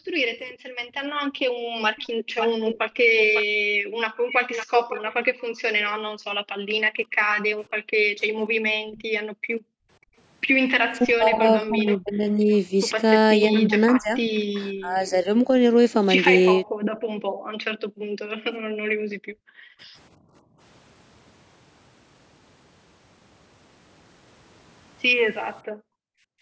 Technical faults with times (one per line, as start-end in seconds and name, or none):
0.00-10.16 background gated by the echo canceller
0.49-5.41 echo leak
10.98-15.51 speech suppressed in double talk
11.89-14.40 echo leak
16.66-20.59 background gated by the echo canceller
25.63-26.42 background gated by the echo canceller